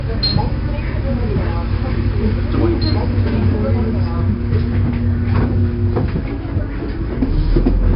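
4-bit ADPCM compression runs from start to finish, and the damage is heavy. Each sample is coded as a small 4-bit step away from a predicted value, so the quantisation error rides along with the signal as a gritty hiss on every loud passage, and sharp attacks smear and distort where the adaptive step size lags behind. Nothing is present above about 5.3 kHz, leaving the sound dull, which fits a data rate near 44 kbps and a sample rate around 11 kHz.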